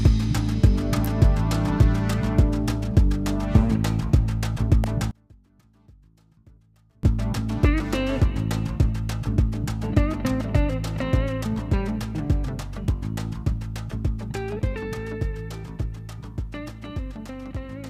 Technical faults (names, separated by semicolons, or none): electrical switching spike; one channel inverted